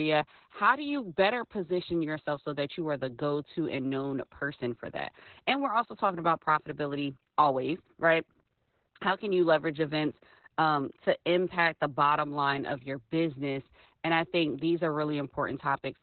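From start to finish the speech carries heavy Opus voice compression: nothing survives above about 4.2 kHz, so it's narrowband and muffled, and the SILK coder's coarse excitation gives a hoarse, slightly robotic edge, which fits a bitrate around 8 kbps.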